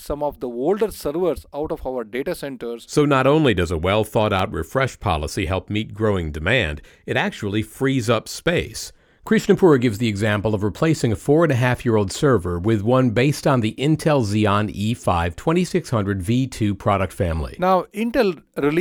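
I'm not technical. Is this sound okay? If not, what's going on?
No. At 4.39 s the playback system likely failed briefly to supply sound in time, leaving a block of digital silence about 3 ms long, which fits a 128-sample buffer. The sudden cut to nothing and back is heard as a small click in the speech.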